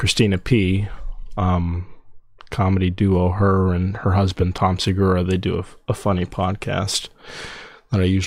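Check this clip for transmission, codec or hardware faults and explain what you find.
One fault is present: de-emphasis applied wrongly, from 1.12 to 4.84 s. During that stretch a treble-cut filter, intended to reverse a pre-emphasis boost, acted on speech that had never been boosted, or was run a second time. With nothing to cancel, the filter simply tilts the spectrum downward toward the top end, leaving 10 kHz about 8 dB below 1 kHz. The speech there sounds dull and muffled, losing its crispness until the filter drops out at 4.84 s.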